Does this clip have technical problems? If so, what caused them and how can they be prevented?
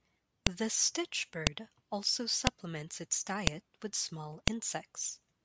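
Yes: file header played as audio, sharp clicks at 0.47, 1.47, 2.47, 3.47 (before "with small") and 4.48 s, one-second pieces joined with headers left in. Strip each piece's header before concatenating or streaming.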